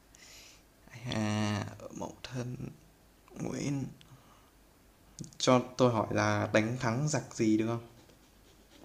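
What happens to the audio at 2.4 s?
Nothing goes wrong at 2.4 s; the speech carries on intact through that moment.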